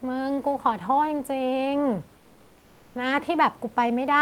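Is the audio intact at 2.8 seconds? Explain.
No. Comfort noise in place of the background runs from 2.17 to 2.95 s, so 2.8 s falls inside it. For these 780 ms the real room background, sitting about 34 dB below the loud parts, gives way to a steady, featureless hiss about 2 dB quieter. The likely cause is discontinuous transmission: the sender stops sending during the pause, and the receiver fills the gap with synthetic noise roughly shaped like the room's.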